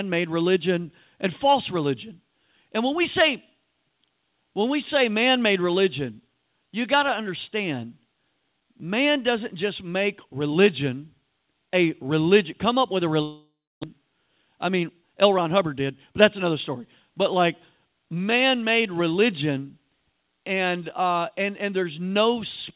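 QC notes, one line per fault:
13.22–13.85 s, long network dropout: Right after "come up with a", audio stops arriving, likely because of a network outage. The receiver covers the gap by continuing the last sound as a fading buzz or hiss lasting about 0.6 s, and it decays to silence for about 0.29 s before sound resumes. About 0.4 s of the original audio is never played, so the sentence jumps ahead. The delay grows by about a fifth of a second.
13.99–16.24 s, jitter buffer speed-up: After the dropout, the jitter buffer holds more audio than its target, so the receiver trims short pitch-period-length pieces again and again until it has shed roughly a fifth of a second. Up to "another story", speech runs about 108% of normal speed at unchanged pitch, which sounds hurried, through G.711 mu-law's band limit at 4 kHz.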